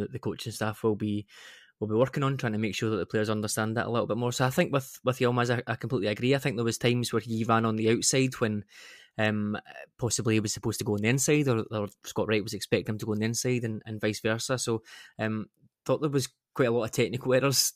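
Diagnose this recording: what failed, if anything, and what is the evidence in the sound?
Nothing failed here: listening through the speech, there's no audible problem at any stage of the chain, so there's no evidence to point to and no fault to trace.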